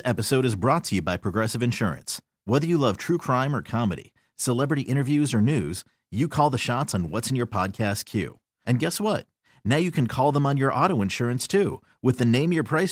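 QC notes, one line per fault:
No faults to note in this clip.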